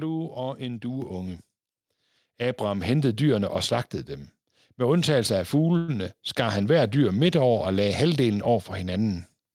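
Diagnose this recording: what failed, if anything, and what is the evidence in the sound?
Two microphone volume steps up, both from the call processing stage. At 1.02 s the speech and the room noise jump together by about 5 dB, then again at 2.82 s by about 3 dB. The software judged the mic too quiet and raised the device input gain in single steps.

A call audio freeze runs from 5.77 to 5.90 s. For about 108 ms the last sound is stretched out as filler, then the speech picks up exactly where it paused, with nothing lost and everything afterwards running about 0.11 s late. That's likely network delay starving the jitter buffer.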